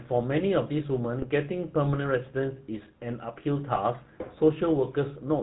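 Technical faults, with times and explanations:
Throughout: GSM full-rate codec. The whole recording has the plainly audible buzzy, gravelly roughness of this early mobile coder, whose character fits a 13 kbps full-rate stream. It models the speech as a vocal-tract filter excited by a sparse, regularly spaced pulse train, keeping only a third of the excitation samples. That coarse excitation gives the grainy texture, and nothing survives above 4 kHz, so the top of the spectrum is dull and missing.
1.22–1.26 s and 3.75–3.81 s: GSM bit errors. The voice breaks into a short squawk or gargling pop in each span, the first lasting about 40 ms and the second about 60 ms. The sound points to corrupted bits reaching the decoder across a few 20 ms frames. When the filter, pitch or gain parameters arrive damaged, the decoder rebuilds a wrongly shaped spectrum or a wrong level for those frames, producing the sudden harsh distortion.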